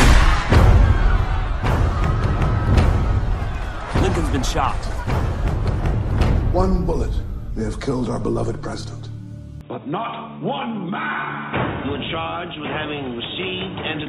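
Input switched to a poorer device, from 9.61 s to the end: with no gap at the changeover, the sound abruptly loses everything above about 3.8 kHz and turns dull and boxy, while its level drops by roughly 10 dB and a faint new noise floor appears well beneath it. This points to the recording having likely moved mid-take onto a narrower-band microphone or a headset's call profile, which imposes its own bandwidth, tone, gain and background noise.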